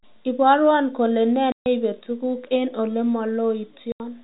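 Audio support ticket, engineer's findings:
Packet loss filled with silence: hard dropouts in the speech, 1.52–1.66 s (140 ms) and 3.92–4.00 s (80 ms). Both lengths fit 20 ms packets. Waveform drops to near-silence, and the spectrogram shows blank vertical gaps with hard edges.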